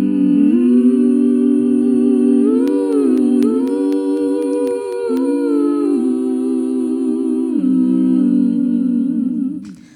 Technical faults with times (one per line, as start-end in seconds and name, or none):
2.68-5.17 periodic USB or driver dropouts